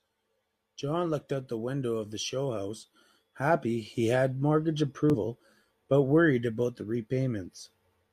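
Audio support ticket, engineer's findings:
Damaged data in a compressed stream, 5.10 to 5.15 s: brief disturbance in the speech. Decoder misreads corrupted frames, loses sync, resyncs at the next frame header. Unlike a network dropout, this comes from bad bytes in the stream itself.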